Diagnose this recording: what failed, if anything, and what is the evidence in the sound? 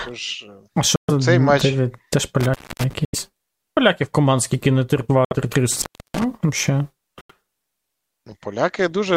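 Silent holes at 0.96, 3.05, 5.25 s (right after "команд скільки не") and 7.21 s, each 64 to 128 ms, with speech picking up further along. That's likely Bluetooth dropout, with packets lost on the wireless link.

Intermittent contact in the analogue wiring: crackly cutouts from 2.41 to 2.93 s and 5.72 to 6.24 s, where a loose plug or cable opened the line for 265 and 324 ms.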